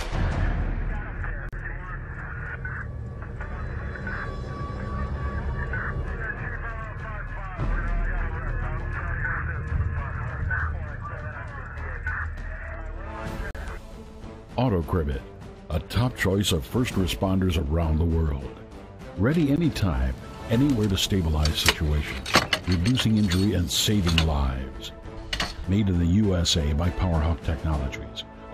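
Gap between stream segments: hard-edged silent holes at 1.49–1.53 s, 13.51–13.55 s and 19.56 s, where mistimed 6 s segment boundaries leave brief silence without losing audio.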